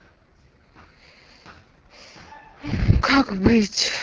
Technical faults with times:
0.00-4.02 AMR wideband (HD Voice) codec

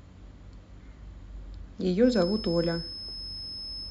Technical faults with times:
2.00-3.90 feedback whistle

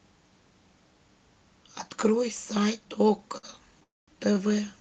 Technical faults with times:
3.37-3.45 short stall from a late packet
3.83-4.09 call audio freeze

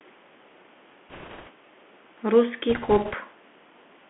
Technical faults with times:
0.00-4.09 Bluetooth CVSD headset codec
1.09-1.50 bit errors on a Bluetooth voice link
2.70-3.14 bit errors on a Bluetooth voice link

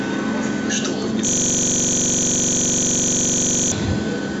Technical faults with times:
1.29-3.72 system hang loop

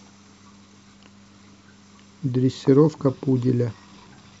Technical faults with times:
none

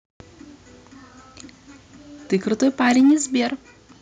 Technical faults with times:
2.33-3.13 microphone overload
3.01 microphone volume stepped down

